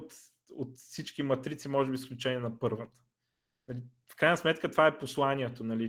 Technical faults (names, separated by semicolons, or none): none